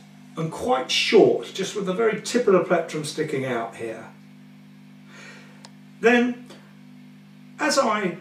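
Nothing in this audio stands out as a technical fault; it runs its whole course with no dropouts, glitches or other problems to point to.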